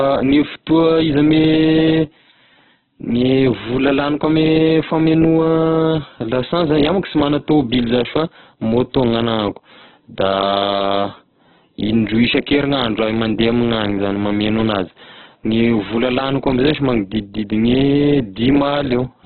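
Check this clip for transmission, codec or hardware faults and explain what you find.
One fault runs through the whole clip: Opus compression, with heavy damage. The likely cause is an Opus encoder held in its music (CELT) mode with far too few bits, which fits a rate of about 8 kbps. To cope, it narrows the band so nothing survives above 4.3 kHz, then keeps each remaining band's energy by filling it with noise or copies folded up from lower bands. The speech therefore sounds muffled, rough and grainy from start to finish.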